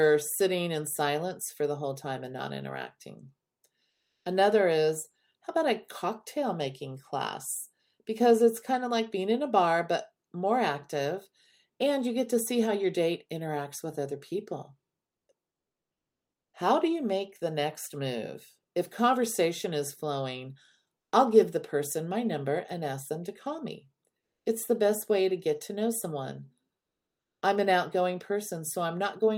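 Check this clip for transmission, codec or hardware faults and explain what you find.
One fault, comfort noise in place of the background, runs from 3.89 to 4.25 s. For those 360 ms the real background, about 52 dB below the loudest speech, becomes steady, featureless noise about 3 dB quieter, likely from Opus discontinuous transmission with receiver-generated filler during the speech pause.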